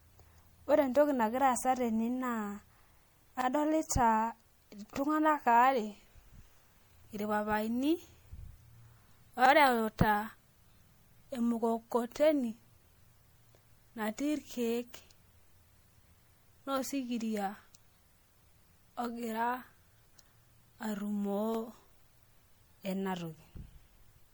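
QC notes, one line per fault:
throughout: generation loss. Likely repeated lossy re-encoding, about four passes, at a bitrate near 96 kbit/s MP3, stacking quantisation noise so the speech sounds swirly, hollow and smeared, with blurred attacks.
3.41, 9.46, 15.50, 21.55 s: overlapping chunks. Each 6-second chunk starts 44 ms before the previous ends, so that slice plays twice, giving a brief stutter or click at every join.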